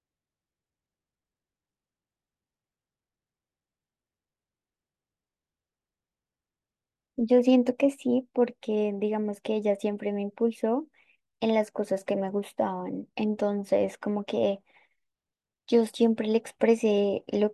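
No technical faults occur at any point in the speech, so there are none to describe in time order.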